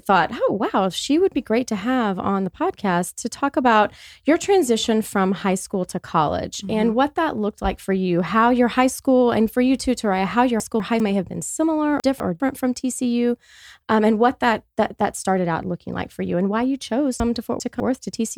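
Chunks out of order hit the speech three times, at 10.6–11.0 s, 12.0–12.4 s and 17.2–17.8 s. Each time a 200 ms chunk plays one slot late, or two slots at 17.2 s, giving a jumbled stumble.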